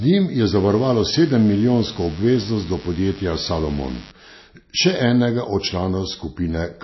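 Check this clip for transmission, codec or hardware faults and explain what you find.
Two problems turn up in this speech clip: a codec issue running the whole way through, and a stretch of mains buzz near the start.

The entire clip has an obvious hard ceiling at 5.8 kHz and a watery, swirly quality, with sibilants turning metallic. The likely cause is heavy MP3 compression at a low bitrate, roughly what you'd get around 24 kbps. Short on bits, the encoder chops off the treble at a fixed point and drops quieter frequency lines that flicker in and out between frames.

From 0.55 to 4.12 s there's mains buzz, a steady, raspy hum built on 50 Hz, sitting roughly 20 dB under the speech. It's the kind of thing a dimmer, rectifier or poor shielding lets in. Sharp switching spikes twice per mains cycle produce a stack of 50 Hz harmonics stretching well up into the kilohertz range, which is why it comes across as a buzz rather than a pure low hum.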